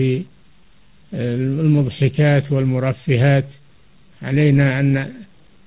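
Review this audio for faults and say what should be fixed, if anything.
Low bit depth without dither runs throughout. Grainy distortion sits about 35 dB below the signal and follows it, so quieter stretches turn gritty. This is likely from truncating to 8 bits without dither. Prevention: keep at least 16 bits, or add dither before any bit-depth reduction.

Clock drift between sender and receiver is present throughout. The sender's clock runs roughly 4% slower than the receiver's, so the jitter buffer keeps draining and the receiver has to pad the audio to avoid running dry. Prevention: apply drift compensation, such as adaptive resampling at the receiver, so both clocks stay aligned.

Repeated timing corrections occur from 0.13 to 5.59 s. The receiver repeatedly repeats short pieces, stretching this span to about 96% speed and adding roughly 200 ms in total. The corrections are unevenly spaced. 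Prevention: smooth time-stretching instead of abrupt repeats would hide these corrections.

The G.711 mu-law call path limits the band to 4 kHz as that codec does.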